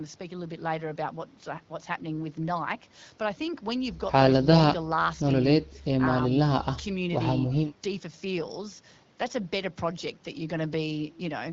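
The speech comes through an AMR wideband (HD Voice) path working as intended at 12.65 kbit/s, the rate at which this codec keeps speech clear, with no technical faults to report.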